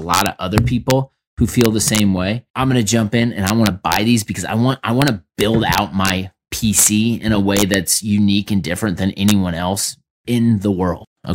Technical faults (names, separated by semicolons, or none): integer overflow